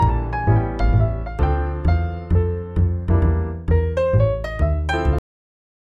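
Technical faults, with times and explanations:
5.19 to 5.93 s, cut-off end: the final buffers were never written or played, so the sound stops abruptly mid-event and falls to silence with no natural decay.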